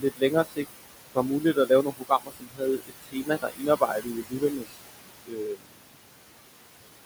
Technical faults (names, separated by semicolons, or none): noise suppressor artifacts; speech cut by the noise suppressor